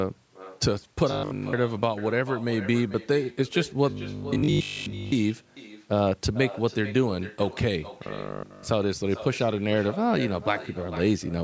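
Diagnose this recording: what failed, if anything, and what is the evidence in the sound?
Echo with no canceller, at the call-processing stage, runs through the whole recording. Every phrase of speech is followed by a quieter, thinner copy about 16 dB down, arriving roughly four tenths of a second later. That delay matches a network round trip: the far end's loudspeaker output reaches its microphone and is sent straight back, with no echo canceller subtracting it before transmission.

Robotic sound from repeated short buffers appears at 1.11–1.53 s, 3.90–5.12 s and 8.07–8.67 s. In each span the speech becomes a rigid metallic buzz pitched at 50 Hz that only loosely tracks the speech contour, and essentially none of the original audio in those spans gets through. The likely cause is audio arriving too slowly at the playback buffer, so the software repeats the last 20 ms segment over and over, imposing a 50 Hz period on the sound.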